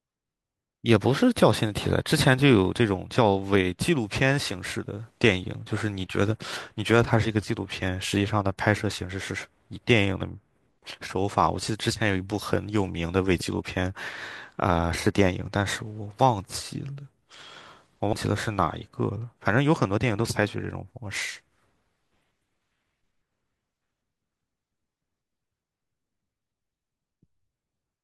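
At 18.13 s, damaged data in a compressed stream causes a brief glitch as the decoder loses frame sync.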